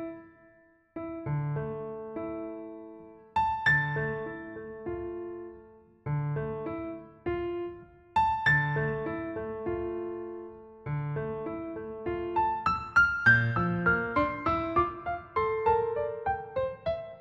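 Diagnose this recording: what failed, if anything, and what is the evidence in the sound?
Nothing failed here; every stage from capture to playback holds together, and there's no event in the sound that points to a problem anywhere in the chain.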